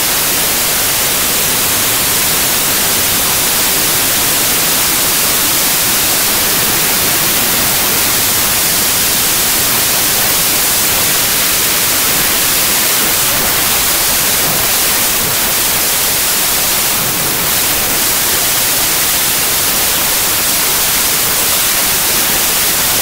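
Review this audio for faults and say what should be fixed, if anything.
The whole clip has a wrong sample width problem. The audio was written as packed 24-bit samples but is being read as 16-bit, so byte boundaries don't line up and most values are assembled from mismatched bytes. You get loud, harsh noise with the real sound buried underneath. Each three-byte sample turns into one and a half reads, so everything plays at 0.667 speed, stretched out and pitched down by that same ratio. Fix it by carrying the sample format in the file header and checking it against the reader's expected width before decoding.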